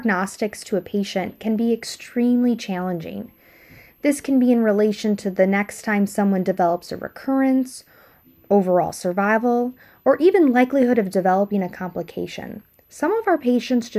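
A switching supply whistle runs throughout this speech clip: a faint high tone drifting between about 11.9 and 12.4 kHz, roughly 40 dB below the speech. A switch-mode power supply is running in an audible burst mode or beating with another one, and its pitch shifts as its load changes.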